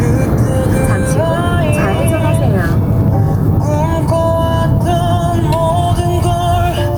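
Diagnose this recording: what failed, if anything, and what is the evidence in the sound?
Gain pumping runs through the whole recording. The level ducks by around 5 dB each time a loud sound arrives, so the level breathes in step with the material and loud and soft events sit unnaturally close together. The likely cause is input gain set far too high at the capture stage, with a fast limiter or compressor clamping down on every peak and releasing between them.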